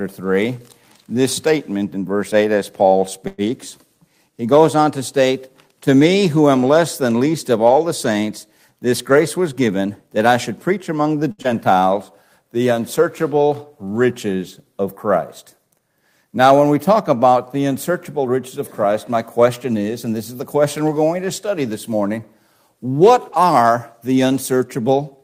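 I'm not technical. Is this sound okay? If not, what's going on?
No, there are a few glitches.

At about 3.27 s the sound briefly hangs: for roughly a tenth of a second (about 108 ms) the last bit of sound is drawn out into a fading buzz or hiss, then the audio carries on from where it stopped. This is a call audio freeze, likely caused by data packets getting held up on the network. The receiving end ran out of audio to play, so it extended the last sound to cover the wait.

From 9.11 to 10.27 s the sound runs about 7% fast without changing pitch, so it feels slightly rushed. The same happens more gently from 18.08 to 19.65 s, at about 4% fast. These are jitter buffer speed-ups. The receiver had built up more waiting audio than it wanted, so it snipped out many tiny slices to catch up. That comes to roughly a tenth of a second in the first stretch and a bit less in the second.

At 11.31 s a sound is held slightly too long, about 67 ms, with a slight buzz or dip. 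This is a short stall from a late packet. A piece of audio wasn't there in time, so the receiver stretched what it had until the piece turned up. Nothing was lost, but the timing hiccups.

Straight after, at 11.42 s, there is a quick smear or wobble lasting about 50 ms. This is short concealed packet loss. About 40 ms of audio never arrived, and the receiver covered the hole with a brief guess based on the sound just before it.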